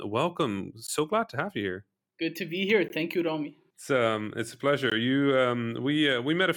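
At 0.87 s, just before "glad to have you", the speech drops out for about 17 ms. The same gap at a join of encoded pieces returns at 2.88 s after "to be here" and at 4.9 s after "um it's a", each about 16 ms, every 2.0 s. Separately encoded segments were butted together with their encoder start delay and last-frame padding left in. The result is brief holes. On a waveform or spectrogram, each shows as a thin, full-band blank column with slightly softened edges.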